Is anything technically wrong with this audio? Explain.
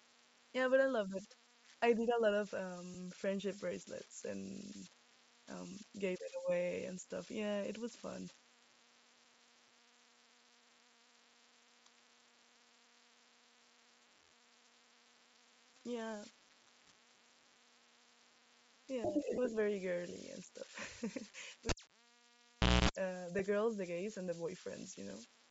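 Yes, there are four separate problems here.

Converter idle tones run the whole way through. There's a whistle somewhere around 200 Hz sitting about 18 dB below the speech, most obvious in the gaps, with a grainy texture under the quieter syllables. That's what a delta-sigma converter does when it isn't dithered: a small input lets it lock into repeating bit patterns, and those patterns come out as a steady tone.

There's also a breathy, grainy edge on the speech throughout, with the top end sounding thin and partly replaced by hiss. That's likely Bluetooth LC3 compression running lean, somewhere around 32 kbps with 10 ms frames. At that rate the encoder throws away much of the upper spectrum and fills it back in with noise, so the damage is plainly audible.

There are lost LE Audio frames at 2.94–2.96 s, 19.36–19.38 s and 23.39 s. Each one is a brief smeared, noisy blip where the sound loses its clarity. 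The first and last fit a single dropped 10 ms frame, and the middle one fits two frames, about 20 ms. When frames go missing, the LC3 decoder patches the gap by reusing the previous spectrum with scrambled signs, which turns tonal sound into a short wash of noise.

Finally, the cable was pulled and plugged back in between 21.69 and 22.89 s. You get a pop, then roughly 1.15 s of near silence. Within that gap, a burst of 60 Hz mains buzz sounds for about a quarter of a second while only the plug tip is making contact, and then a second pop as full contact comes back and the sound returns.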